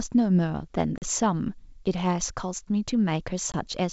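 At 0.98 s and again at 3.52 s, packet loss on an ADPCM call cuts hard-edged silent holes of 40 ms and 20 ms into the G.722 speech. Unlike smoothed concealment, the decoder's predictor and step size lose sync, so each return comes back slightly distorted before settling.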